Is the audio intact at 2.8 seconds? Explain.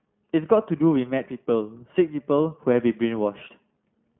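No. At 2.8 s the speech carries iLBC codec damage, which runs through the whole clip. The sound is squeezed into a telephone band of about 150 Hz to 3.4 kHz, with a rough, slightly synthetic edge, consistent with 20 ms frames at around 15.2 kbps, each coded independently. A plain band-pass filter would dull the sound but leave it smooth. This roughness comes from the coding of the excitation itself.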